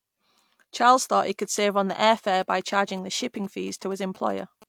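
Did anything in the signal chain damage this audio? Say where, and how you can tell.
Yes. GSM signalling bursts got into the analogue wiring from about 2.27 s, just after "save on the air", to 4.64 s. Over that span a galloping dit-dit-dit of short buzzes sits roughly 25 dB under the speech, the buzz pitched near 217 Hz. A nearby 2G handset was transmitting short radio bursts, and the audio circuit rectified them, so their switching envelope became audible as a pulsed interference pattern.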